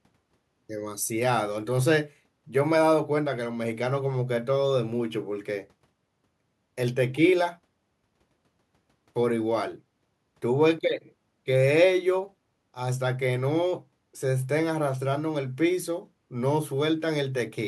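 No technical faults are audible anywhere in the speech recording.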